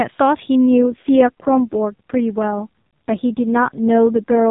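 From 0.71 s to the end at 4.50 s, the mobile link falls into an AMR rate drop: the AMR-NB speech codec is pushed to a lower mode so that more of each frame goes to error protection, which fits a step from 12.2 down to 4.75 kbps. The narrowband band limit stays where it was and nothing drops out, but with so few bits describing each pulse the speech turns buzzy, coarse and noticeably synthetic for the rest of the clip.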